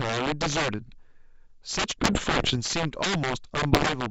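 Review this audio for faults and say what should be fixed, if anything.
Violent, harsh cracks run through the whole speech clip on every loud syllable, far sharper and more explosive than ordinary clipping. This is integer overflow: the signal was driven about 12 dB past full scale, and roughly 7 percent of samples exceeded the integer limit. Instead of being held at the ceiling, each of those peaks wrapped to the opposite sign, so the waveform jumps across the entire range at every overload. To prevent it, use saturating arithmetic or a limiter and keep gain staging below full scale.

Two stretches of popping and rough, gritty bursts with brief jumps in level come from bit errors on an ADPCM link. The first runs from 1.99 to 2.57 s, at an error rate of around 1 percent. The second, from 3.72 to 3.97 s, is denser at around 3 percent. Each flipped bit corrupts the decoder's step size and predictor, so the disturbance rings on for several milliseconds rather than staying a single click. 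This happens within a 64 kbit/s G.722 wideband stream whose coding is otherwise clean. To prevent it, add error protection or concealment on the transmission link.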